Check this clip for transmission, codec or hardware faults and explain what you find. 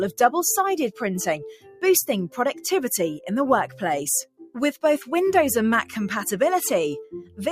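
Two faults are present, both from a speech-oriented noise suppressor left active on non-speech audio.

Noise suppressor applied to music or sounds, throughout: the level pumps, flutters or thins, swinging by around ten decibels, because the suppressor treats steady tones, ambience and reverb as noise.

Sound cut by the noise suppressor, at 1.51–1.82 s, 4.25–4.56 s and 7.05–7.39 s: the audio sinks by about 15, 18 and 13 dB, each time for roughly a third of a second. The suppressor mistook these passages for noise and pulled them down harder than the rest.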